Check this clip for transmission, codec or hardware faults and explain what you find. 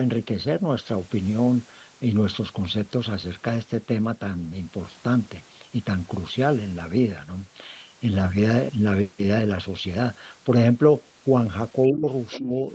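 Two kinds of fault turn up near the end of the speech, both pointing to echo cancellation on a call whose audio stops at 8 kHz.

Speech suppressed in double talk, from 11.92 to 12.08 s and 12.38 to 12.68 s: the voice dips by roughly 15 dB, likely because the echo canceller mistook simultaneous talk for echo and attenuated everything. The waveform envelope sags.

Other side's voice leaking through, from 12.31 to 12.39 s: a faint second voice sits about 15 dB below the talker, likely loudspeaker echo the canceller failed to remove. On a spectrogram it shows as a brief, weak harmonic trace overlapping the main speech.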